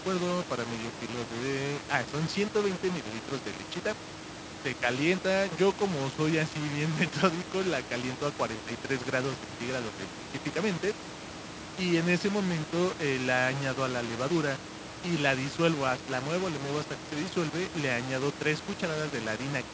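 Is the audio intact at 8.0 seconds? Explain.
No. At 8.0 seconds, as throughout the clip, the speech sounds grainy and gritty, with distortion that shifts as the speech changes and quiet passages sputtering. The likely cause is low bit depth without dither: values rounded to about 5 bits, leaving error only about 10 dB below the signal.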